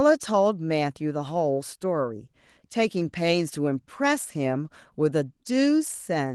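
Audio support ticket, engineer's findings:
No faults found.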